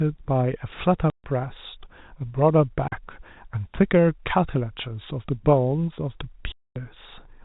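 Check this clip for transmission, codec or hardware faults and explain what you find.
The speech breaks up three times from packet loss filled with silence: gaps at 1.1 to 1.24 s (140 ms), 2.88 to 2.92 s (40 ms) and 6.52 to 6.76 s (240 ms). Every gap length is a multiple of 20 ms, which fits 20 ms packets. Missing packets were replaced by dead silence with hard edges rather than smoothed or repeated audio, which is what separates this from concealed loss. The whole clip has the G.711 telephone band limit, with nothing above 4 kHz.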